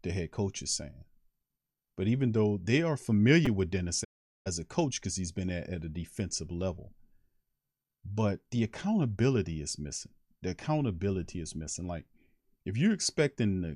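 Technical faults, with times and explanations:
3.46 s, repeated buffer: after "even though they are", one 5 ms piece of sound repeats several times with hard joins, heard as a brief buzz.
4.03–4.48 s, digital broadcast dropout: sound fades out over about 20 ms and stays muted for 0.41 s, then returns at "a coach because he's".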